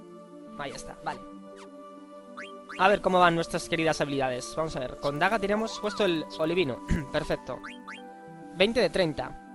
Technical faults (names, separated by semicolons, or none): resampler restarted on every block